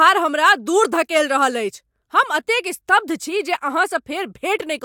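No technical faults can be heard in this speech recording.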